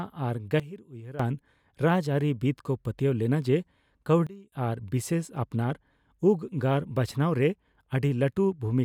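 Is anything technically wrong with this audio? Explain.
Yes. Sudden gain jumps drop the level by about 15 dB from 0.6 to 1.2 s and about 22 dB from 4.27 to 4.52 s. Speech and background noise fall and recover together, instantly, with no fade, which sets this apart from a dropout or ducking. The likely cause is a gain change applied without a ramp.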